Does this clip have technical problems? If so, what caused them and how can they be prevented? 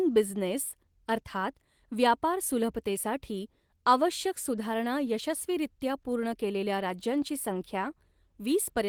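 No, the signal has no technical problems, and the speech comes through with the full audio band intact, consistent with a moderate-rate Opus voice encoding.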